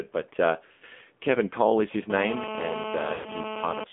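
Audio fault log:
throughout AMR narrowband mobile codec: speech coded by AMR-NB at 7.4 kbps, band limited to roughly 200 Hz to 3.5 kHz, leaving a muffled, buzzy, plainly synthetic voice.
0.66–0.85 s lost AMR speech frames: about 140 ms of frames failed over 160 ms, longest run 100 ms; the decoder repeated old settings with falling gain, giving a smeared fade.
2.1–3.84 s GSM phone buzz: a nearby phone in a call bursts at 217 Hz, rectified into the audio, adding a harsh raspy buzz about 6 dB below the speech.
3.14–3.35 s lost AMR speech frames: 100 ms of frames lost; concealment stretches the last sound then fades it out, and speech returns weak or rough for a moment.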